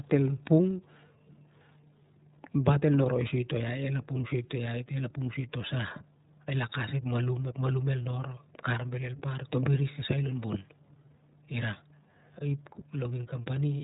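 iLBC codec damage runs through the whole speech clip, and it is plainly audible. Nothing above 3.8 kHz survives, so sibilants lose their edge and the sound is boxed into the narrow telephone band. Because each frame's excitation is coded on its own, with no help from the frame before, the speech comes out clear but rough and slightly synthetic. The texture fits 30 ms frames at roughly 13.3 kbps.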